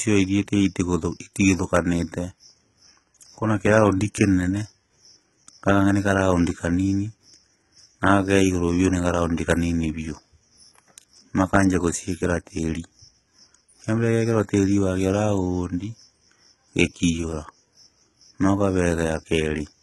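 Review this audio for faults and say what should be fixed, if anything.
Throughout the speech, sibilants sound gritty and metallic, with a bright but synthetic-sounding treble that stops completely above 11.8 kHz. The likely cause is HE-AAC compression: the upper band is rebuilt from copied lower bands rather than coded, which fits a very low bitrate around 16 kbps. To prevent it, encode at a higher bitrate or use plain AAC or another full-band codec.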